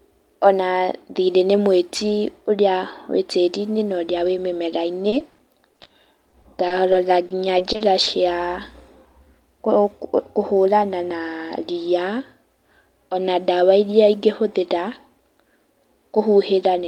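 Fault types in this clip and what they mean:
Repeated packet loss (robotic sound): from 5.09 to 8.08 s the speech turns choppy as audio keeps dropping out, each gap of up to 40 ms patched by extending the previous sound. The waveform shows repeated, truncated chunks, and the spectrogram shows frozen, smeared harmonics split by thin gaps.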